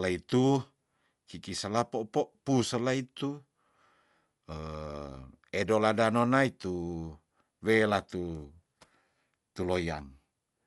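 From start to finish the speech sounds dull, with nothing above 11.5 kHz and a rough, fluttering noise clinging to the voiced sounds. This is likely Dolby Digital compression at a low bitrate, which fits roughly 64 kbps: the encoder narrowed the band and left many frequency lines without mantissa bits, so the decoder filled them with dither noise. That noise fill sets it apart from a plain low-pass filter, and from MP3's watery, swirling artefacts.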